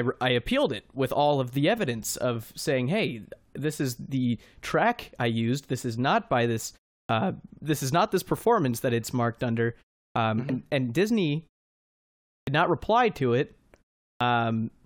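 At 7.04 s the speech resumes after a 0.34 s pause with a clipped start. About 53 ms of the onset is gone. The output device dozes off in the silence and takes a moment to wake. Whatever arrives in that moment is lost. The word bursts in abruptly, missing its first sounds. The same clipping returns at 10.10 s after a 0.35 s pause, with about 56 ms lost.

At 10.49 s compressed frames are skipped. Frames here last 23.2 ms, and about four are dropped, so roughly a tenth of a second of speech vanishes. The decoder either never received them or rejected them as corrupt. Playback leaps forward.

Clipped starts follow again at 12.42 s, after a full second of pause, losing about 55 ms, and at 14.16 s, after 0.41 s, losing about 48 ms.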